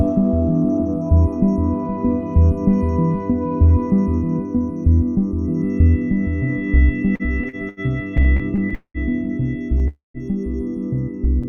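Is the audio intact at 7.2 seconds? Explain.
No. At 7.2 seconds the audio is in a stretch of repeated stalls (stutter), from 7.15 to 7.80 s. Packets arrived late, so playback stalled four times, each gap filled by continuing the last sound for up to 80 ms. Unlike dropouts, nothing is lost; the audio drags and stutters.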